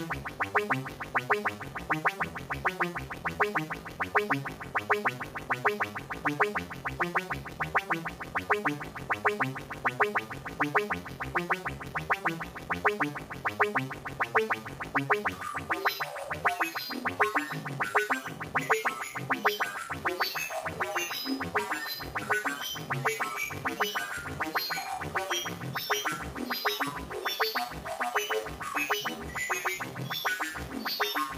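No technical faults can be heard in this recording: the signal holds steady throughout, without any break, distortion or other defect.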